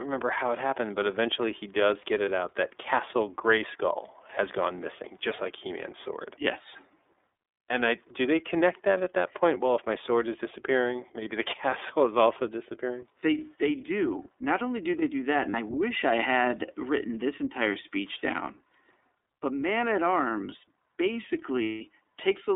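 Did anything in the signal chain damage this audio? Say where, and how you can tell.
Yes. At the codec stage, the iLBC codec leaves a rough, synthetic tone. A spectrogram shows energy only between 300 Hz and 3.6 kHz, which fits iLBC's 30 ms, 13.33 kbps mode.

At the network stage, lost iLBC frames cause held buzzy patches at 2.25 s, 15.5 s and 21.62–21.81 s. The decoder repeats the last pitch cycle, so the waveform shows repeated periods, with the 180 ms gap fading.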